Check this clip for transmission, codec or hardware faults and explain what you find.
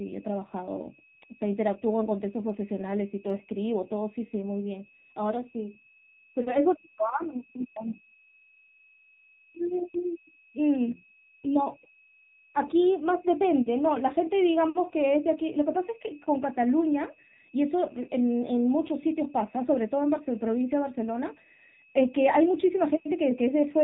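Two faults run through the whole clip: a switching supply whistle and the damage of an AMR narrowband mobile codec.

The switching supply whistle is present from start to finish. It sits between about 2.56 and 2.6 kHz, sliding slightly within that band. A switching power supply is cycling at an audible rate and leaking into the audio path. The tone is weak, roughly 30 dB below the speech. It is heard as a thin, steady high whistle behind the talking.

The AMR-NB codec damage is also constant and plainly audible. The speech has passed through the narrowband mobile coder. It samples at 8 kHz and rebuilds the voice from a vocal-tract model fed by a few pulses per frame. Nothing above 4 kHz survives, so the speech sounds muffled and boxy. The low bit budget, which fits a rate near 7.4 kbps, makes the voice buzzy and synthetic.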